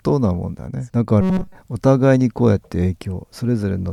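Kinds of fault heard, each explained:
Robotic sound from repeated short buffers: the speech turns into a rigid 188 Hz buzz from 1.21 to 1.55 s, likely a buffer of about 5 ms replayed in place of new audio.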